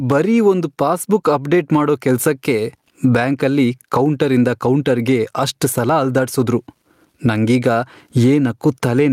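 Gain pumping throughout the speech: the gain swings about 20 dB, pulled down under loud syllables, likely from a fast limiter. The waveform looks flattened.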